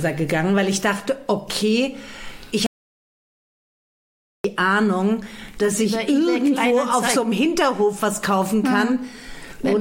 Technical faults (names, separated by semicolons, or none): audio dropout to silence